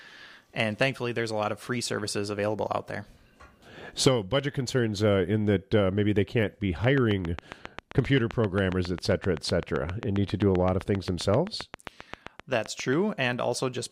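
A train of clicks, likely from interference, ticks regularly at 7.6 per second from 6.84 to 12.94 s, showing as evenly spaced waveform spikes and vertical spectrogram lines.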